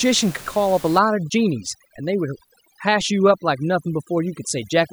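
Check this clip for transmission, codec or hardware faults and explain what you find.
One fault stands out, and it is a processing problem rather than a transmission or hardware one: overdone noise removal, running from 0.99 s to the end of the clip. A noise reducer set far too aggressively is pulling individual frequency bands down or out whenever their level sits close to its noise estimate. The room noise, about 19 dB below the speech, gets pulled down and breaks up into twinkling, warbling specks, and the quieter parts of the speech vanish with it. On a spectrogram, the background becomes dark with scattered isolated bright dots, and speech harmonics look patchy and ragged at their edges.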